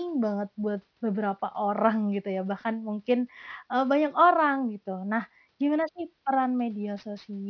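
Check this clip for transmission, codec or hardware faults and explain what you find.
The speech carries aliasing from start to finish. High-frequency content has been folded back into the audible band, which fits a sample-rate drop from 44.1 kHz to 11 kHz without a proper anti-aliasing filter. Everything above the new Nyquist point at 5.5 kHz mirrors downward to unrelated frequencies, sitting roughly 35 dB below the signal. Sibilants sound gritty and metallic, and the spectrum runs hard up to the 5.5 kHz edge instead of rolling off.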